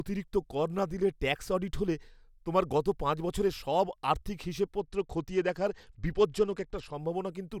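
After "পাঁচ বছরের সব আর্থিক", from 4.79 to 6.93 s, a Bluetooth SBC bit pool drop, pointing to a congested link near 88 kbps, starves the top sub-bands. Treble dulls and gritty noise rises, and the spectrogram's upper bands thin out.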